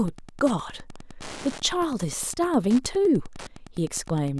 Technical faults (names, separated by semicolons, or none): Wi-Fi interference